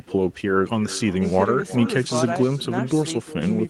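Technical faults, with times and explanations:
Throughout: echo with no canceller. Every stretch of speech is trailed by a second copy arriving roughly four-tenths of a second later and about 18 dB quieter, sounding thinner than the original. The far end is playing the call through a loudspeaker while its microphone picks it up again, and nothing subtracts that return, so the talker's own voice travels back across the network. The long, discrete delay separates it from room reverberation, which smears continuously without a distinct repeat.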